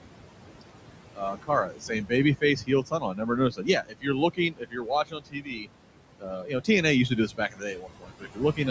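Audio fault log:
Throughout, noise suppressor artifacts: the room noise, which sits about 12 dB under the speech, gets pulled down by about 18 dB whenever the suppressor decides a band is just steady hiss. It does this frame by frame, so the background drops away in the gaps and swells back in under the speech. The call mic's high-pass and the top end stopping at 8 kHz are just the normal call path.
1.14–1.5 s, 1.66–2.12 s, 2.41–3.3 s, 3.5–4.07 s, 4.34–5.67 s, 6.19–6.69 s (just before "used to do") and 7.28–8.59 s (just after "used to do"), speech cut by the noise suppressor: here the suppressor mistakes quieter bits of speech for noise and ducks them along with the background, by about 14 to 18 dB at worst. Only part of each stretch gets hit, anywhere from a fifth of a second up to about a second in the 4.34 s stretch, so soft consonants and endings come out swallowed and faint.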